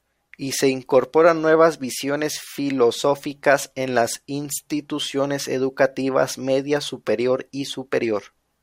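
No technical fault can be heard anywhere in the speech recording. There is nothing to place in time and nothing to point to as having gone wrong.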